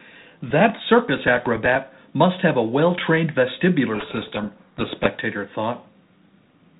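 From 3.94 to 5.07 s, a codec payload misread: the G.726 code words arrive with their bit order reversed, so the decoder applies wrong prediction differences, burying the speech in harsh, rasping distortion until the packing agrees again. The G.726 path at 32 kbit/s shows only light codec coloration and nothing above 4 kHz.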